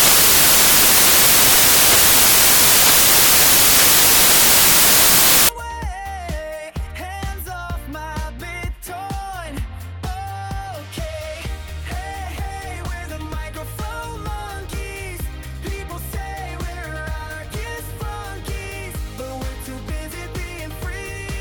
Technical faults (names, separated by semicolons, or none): samples built from the wrong bytes